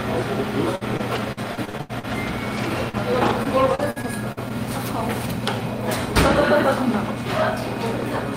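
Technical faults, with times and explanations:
0.75–4.52 s, repeated packet loss (robotic sound): sixteen short holes open in the sound, none longer than 83 ms, adding up to about 580 ms missing, or roughly 15% of the span. The receiver masks each hole by stretching the last received audio forward, about 565 ms of patched material in total, and only around a fifth of a second ends up rebuilt. The holes come in close succession, so the sound turns choppy and takes on a robotic quality.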